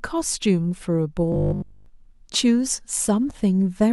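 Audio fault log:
1.32–1.86 s, robotic sound from repeated short buffers: fresh audio likely stopped arriving in time, so the playback side kept looping the last 20 ms chunk while the real signal in between was skipped. Across essentially the whole half-second the speech is replaced by these repeats, and their fixed cycle stamps a steady 50 Hz buzz on it, one over the 20 ms loop length. The result is a rigid, metallic drone that only loosely tracks the speech.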